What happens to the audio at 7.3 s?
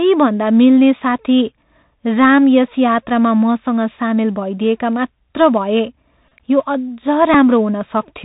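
At 7.34 s a Bluetooth headset packet repeat interrupts the speech. Voice data between headset and phone dropped out for about 7.5 ms, and the decoder filled the gap by replaying the previous packet's bits. That span fits two consecutive 3.75 ms packets being covered. It is too brief to build into the steady 267 Hz buzz of a longer run and comes through as a small tick. On a waveform it shows as a short stretch of duplicated cycles with a seam at each boundary, and on a spectrogram as a thin vertical line.

Under that moment, and across the whole clip, the Bluetooth CVSD headset codec is plainly audible. Its one-bit, 64 kHz up-or-down coding with an adapting step leaves nothing above 4 kHz. Sibilants sound scratchy, loud high-frequency sounds distort where the step can't keep pace, and a granular hiss sits beneath the speech. A spectrogram shows a hard ceiling at 4 kHz with a grainy noise floor below it.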